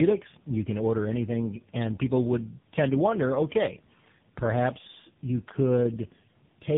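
From start to finish the speech sounds rough, muffled and warbling, with nothing above about 3.7 kHz. That points to tandem speech coding: the signal appears to have passed through three low-rate speech coders in turn, consistent with two GSM full-rate stages and a final AMR-NB stage near 7.95 kbit/s, with G.711 links decoding and re-encoding at each border between them. Each coder reworks the previous one's artefacts, so the degradation compounds.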